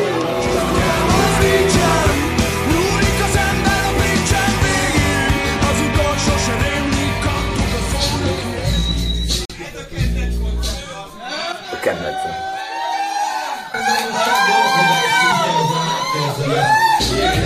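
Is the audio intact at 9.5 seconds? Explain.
No. From 9.45 to 9.50 s the sound drops out for about 44 ms, a hard-edged hole of pure silence. This is a gap between stream segments: two segments' time stamps don't quite meet, and the player fills the gap with silence. Nothing is lost.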